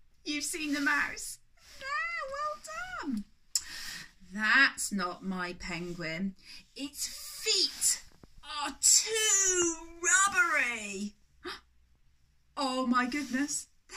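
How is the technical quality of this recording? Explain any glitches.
The technical quality of this recording is sound, with no glitches to explain.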